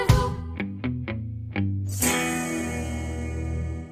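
No technical faults can be heard anywhere in this clip.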